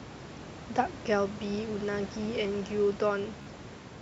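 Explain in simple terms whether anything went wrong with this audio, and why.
Near the end, from about 3.42 to 3.47 s, there's a Bluetooth stutter: a few wireless packets went missing, so the receiver repeated its last little slice of sound, giving a brief buzzy jitter, then picked up about 44 ms further along.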